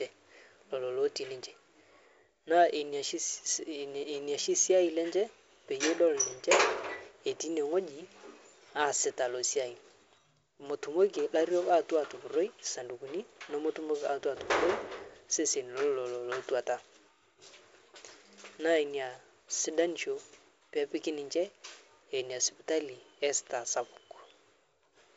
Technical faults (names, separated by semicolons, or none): none